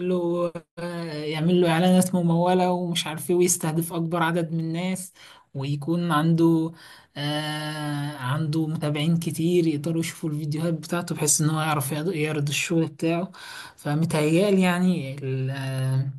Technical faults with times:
none

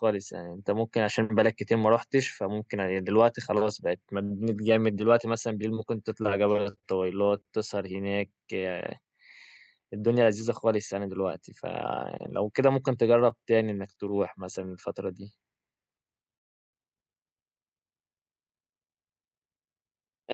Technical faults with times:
4.23-4.32 short stall from a late packet
9.78-10.51 jitter buffer speed-up
16.37-16.75 call audio freeze
18.52-20.27 jitter buffer speed-up

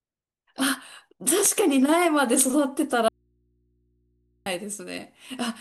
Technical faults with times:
3.08-4.46 audio dropout to a faint residue

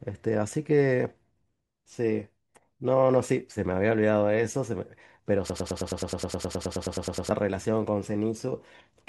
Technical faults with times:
5.50-7.31 broken-record loop

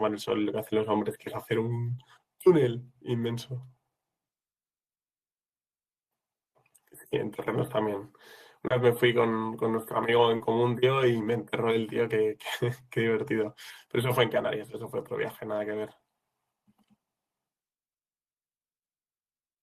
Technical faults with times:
8.67-8.72 short concealed packet loss
10.36-10.42 short concealed packet loss

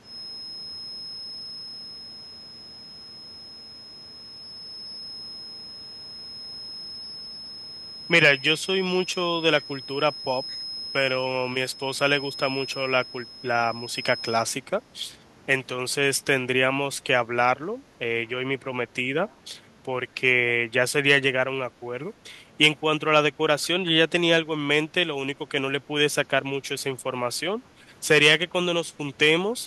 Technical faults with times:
10.48-10.61 echo leak
19.28-19.35 echo leak

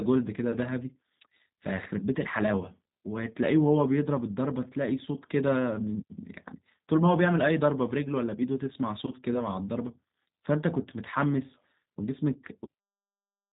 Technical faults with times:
0.00-13.52 G.729 codec

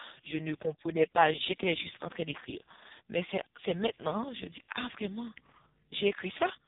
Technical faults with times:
0.00-6.67 AMR narrowband mobile codec

